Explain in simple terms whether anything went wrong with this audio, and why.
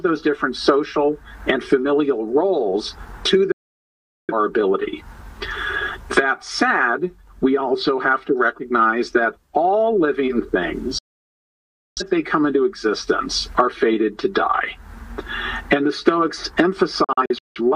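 Digital broadcast dropouts at 3.52–4.33 s, 10.98–12.02 s and 17.04–17.61 s: the receiver lost usable signal and muted instantly, so that sound is gone. The last dropout comes as several short holes.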